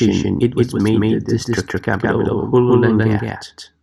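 From start to finish the speech is shadowed by a second, equally loud copy of itself trailing a little over a tenth of a second behind, around 150 ms. Every syllable lands twice, giving a stuttering, slapback effect with no reverberant tail or room tone. This is a doubled audio track, likely the same signal reaching the mix twice, once directly and once through a slower capture path or a misaligned duplicate.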